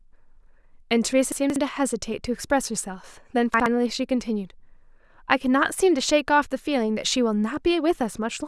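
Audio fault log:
1.32–1.56 s and 3.54–3.66 s, chunks out of order: a 60 ms chunk plays three, then one, chunks late, jumbling the sound; the waveform shows three hard joins each time.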